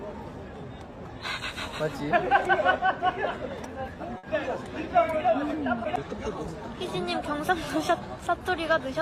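At 4.17 s a burst of packet loss hits: several consecutive packets never arrive in time, so the receiver has nothing real to play. It bridges the hole by extending the last sound it had, about 60 ms of concealment that fades in level as it runs, before real audio picks up again around 4.25 s. About 60 ms of the original is simply gone, so the sound jumps forward where it resumes.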